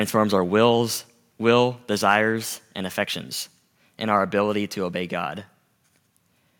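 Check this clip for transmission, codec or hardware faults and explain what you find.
One hardware fault shows up in this speech clip: a brief microphone overload from 2.11 to 2.16 s. The input gain was likely set too high, so a loud peak ran past the converter's maximum level by about 1 dB and its tops were flattened rather than recorded. Only around one percent of the samples are affected, but in that 50 ms stretch the squared-off waveform adds a short, harsh crackle to the loudest part of the syllable.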